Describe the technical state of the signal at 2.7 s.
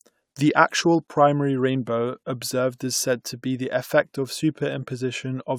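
At 2.7 s the speech signal is intact, with no audible fault at that moment.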